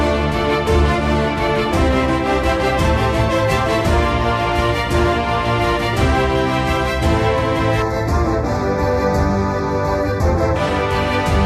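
From 7.82 s to 10.56 s the sound turns hollow and thin: channel delay (comb filtering). One channel arrives a fraction of a millisecond late, so the mono sum cancels near 3 kHz and at evenly spaced frequencies above, showing on a spectrogram as fixed horizontal dark bands.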